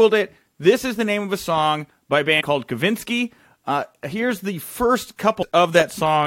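A speech recording with damaged data in a compressed stream: a short run of the encoded data was corrupted, so the decoder misread the frames there, lost its sync and had to hunt for the next valid frame header before it could resume normal decoding. Just after "a song by a", from 2.39 to 2.42 s, this comes through as a brief glitch, a roughly 23 ms disturbance where the decoder stumbled over the bad data.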